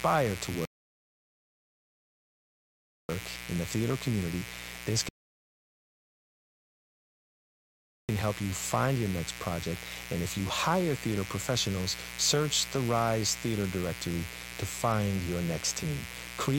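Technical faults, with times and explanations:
Throughout, mains buzz: switching spikes from a dimmer, rectifier or unshielded connection get into the signal path twice per 60 Hz cycle, adding a stack of harmonics up into the kilohertz range. The result is a constant raspy buzz, roughly 10 dB below the speech.
0.65 to 3.09 s and 5.09 to 8.09 s, rebuffering stalls: the player used up its downloaded audio and had to wait for more data. The speech drops to silence and then picks up exactly where it stopped, so nothing is missing, but about 2.4 s and 3.0 s of dead air are added.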